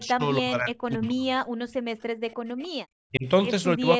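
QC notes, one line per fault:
0.00–1.29 s, 2.73–3.27 s, 3.77–4.00 s: speech suppressed in double talk. The voice on the loudspeaker side is pushed down in level, by about 30 dB at worst in the first span, about 40 dB in the second and about 25 dB in the third. Roughly a second, a third of a second and a sixth of a second of each span are affected. This is likely an echo canceller that could not tell that talker apart from the loudspeaker echo while both were active, so it turned both down.
1.05–1.10 s, 2.30–2.67 s: echo leak. A delayed copy of the loudspeaker voice returns 286 ms after the original, sitting about 30 dB below the speech. The first occurrence is a brief scrap, and the second lasts over a third of a second. The likely cause is that the loudspeaker side's echo canceller did not fully remove what its microphone picked up from the loudspeaker, so the leftover was sent back down the line.
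1.57–2.45 s: background gated by the echo canceller. The room sound drops away, by about 40 dB at its deepest, for roughly 0.7 s in total within this span. It comes back once the canceller releases. While the loudspeaker was playing, the canceller clamped the microphone down hard, taking the ambient background with it rather than only the echo.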